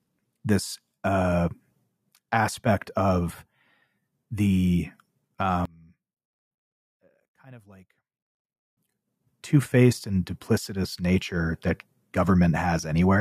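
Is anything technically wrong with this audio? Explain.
Yes. From 5.65 to 8.77 s the speech drops by about 29 dB and nearly vanishes. The likely cause is one channel inverted. One side's polarity is reversed, so the centred voice cancels when both channels sum to mono. Only their small difference remains.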